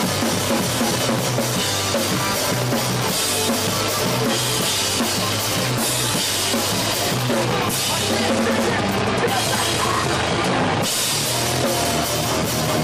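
Nothing here trips the ear at any point; there's no fault to report in this clip.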